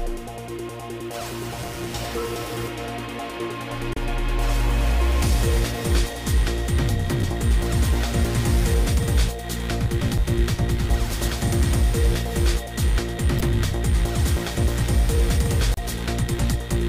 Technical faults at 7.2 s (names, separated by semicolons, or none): damaged data in a compressed stream